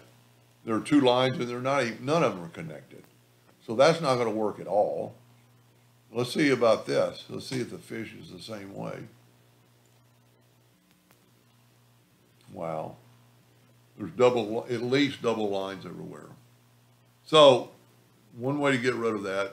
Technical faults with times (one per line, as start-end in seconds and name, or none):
none